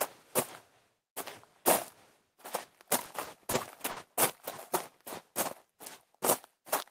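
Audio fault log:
2.83 to 3.55 s, repeated stalls (stutter): the jitter buffer ran dry four times as packets arrived late, and the receiver held the last sound through each wait, about 80 ms filled in all, none longer than 30 ms, so the sounds drag and stutter without losing anything.
3.91 to 3.98 s, short stall from a late packet: one packet arrived roughly 50 ms behind schedule, emptying the buffer, so the receiver stretched the preceding sound for 50 ms before resuming at the same point, giving a held moment with a faint buzz or dip.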